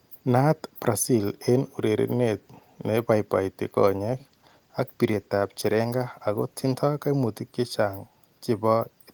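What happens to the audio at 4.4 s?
At 4.4 s the speech is inside a call bitrate drop running from 4.1 to 6.83 s. The encoder codes more coarsely, consistent with a fall from about 32 to 17 kbps, so the voice turns rough and muffled as the highs thin out. There are no gaps or clicks, which would point to packet loss.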